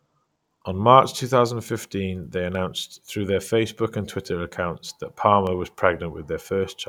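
Dropped samples at 1.69, 2.55 and 5.47 s: each is a single sharp click in the speech, a thin vertical line across the spectrum. The likely cause is a fraction of a millisecond missing from the stream, so the waveform jumps abruptly to a later value.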